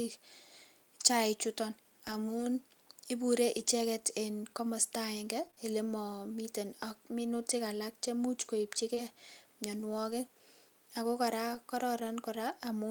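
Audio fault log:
2.07–5.58 s, scattered short gaps: roughly three separate holes appear across this stretch, ending just before "ele mamii teen ak". About 60 ms of audio went missing in total, and none of the holes runs much past 20 ms. The receiver covered each one by extending the sound that came before it. Each repair is only a tick or small hiccup, together about 1% of the stretch.
8.94–8.99 s, short concealed packet loss: just after "ak minutik alaak chemuuch", about 20 ms of audio never reached the decoder in time. It filled roughly 21 ms by carrying the preceding sound forward, following its pitch where it was voiced and shaping noise where it was not, then crossfaded back into the real signal. The result is a brief smear or wobble rather than a silent dropout.
8.97 s, 10.11 s, 11.55 s, lost packet rebuilt from error correction: at each point a single 20 ms packet was lost. The packet that followed carried a low-bitrate copy of it, which is Opus in-band forward error correction, and the decoder played that copy in its place. 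There is no gap, but each rebuilt moment sounds rougher and noisier than the audio around it, because the backup copy holds much less detail.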